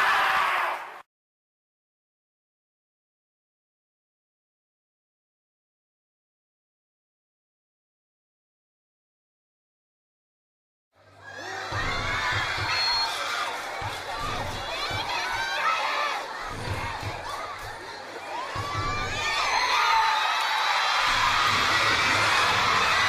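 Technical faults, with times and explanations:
12.56 to 13.10 s, loudspeaker feedback squeal: a 4.3 kHz tone swells over roughly a third of a second to about signal level as the mic-speaker loop exceeds unity gain, showing as one bright horizontal spectrogram line.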